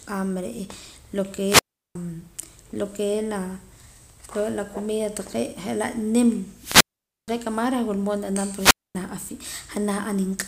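At 1.44 to 1.95 s, 6.54 to 7.34 s and 8.52 to 8.96 s the speech breaks up in a wireless microphone squelch dropout. The analogue radio link weakens, a short swell of hiss comes in, and then the receiver's squelch mutes the output for about 365 ms, 475 ms and 243 ms. What separates this from a digital packet dropout is that rise of static before each silence.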